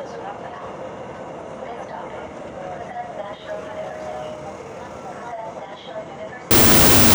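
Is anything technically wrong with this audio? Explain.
Yes. From 6.51 s to the end at 7.15 s there is a wrong sample width fault: 16-bit integer data read as unsigned 8-bit. Each byte becomes its own sample, so the audio plays at half speed, an octave low, buried in harsh noise. The waveform turns dense, and the spectrogram fills with broadband hash.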